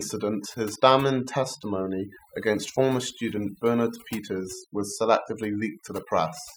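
Overdone noise removal runs through the whole speech clip: an aggressive noise reducer cuts bands near its noise estimate, leaving twinkling near-silence.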